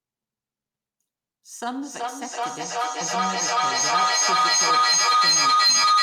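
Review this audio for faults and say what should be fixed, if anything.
From 1.8 s to the end of the clip there is feedback echo between two devices. The speech comes round again about every 0.4 s, each pass thinner and more ringing, and the repeats build to about 15 dB above the speech instead of dying away. Ordinary room echo fades after one or two quieter returns; this sustained, growing loop shows a second nearby device replaying the audio into a microphone whose canceller ignores it. Mute or remove the second device from the call.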